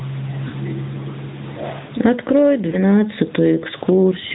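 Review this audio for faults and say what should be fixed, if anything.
Gain pumping runs throughout: the gain swings by roughly 15 dB, pulling down under each loud syllable, flattening the level contrast and squashing the speech. The likely cause is input gain set far too high, with a fast limiter clamping every peak. Lowering the microphone gain and relaxing the limiter's attack and release would prevent it.

The AMR narrowband mobile codec is audible across the whole clip: nothing passes above 4 kHz, and the pulse-driven vocal tract model leaves a plainly buzzy, synthetic edge consistent with a mid-rate mode around 10.2 kbps. A wideband codec or higher bitrate would avoid this.

Lost AMR speech frames occur at 0.48 to 0.55 s, a 40 ms gap consistent with two frames, and at 2.70 to 2.76 s, about 20 ms. The decoder stretched the last good pitch and spectral shape at fading level, drawing out the sound in the two-frame gap and giving a brief dip or warble at the single lost frame, and the voice returns weak or rough for a moment. 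A stronger radio link or error protection would prevent these dropouts.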